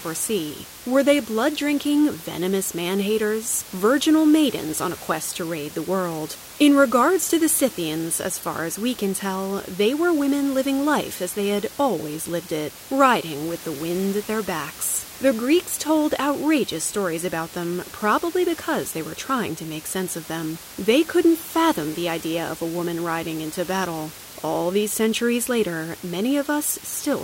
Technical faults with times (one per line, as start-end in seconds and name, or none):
none